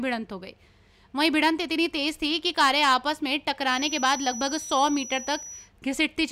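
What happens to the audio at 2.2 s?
Nothing goes wrong at 2.2 s; the audio runs straight through that moment without any dropout, click, glitch or other fault.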